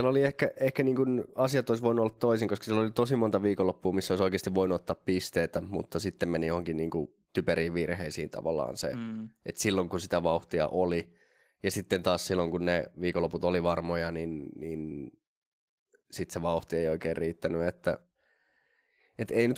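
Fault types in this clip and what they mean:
Nothing here counts as a fault; the speech simply comes through Opus voice compression at around 20 kbps, which is how this kind of audio is normally carried.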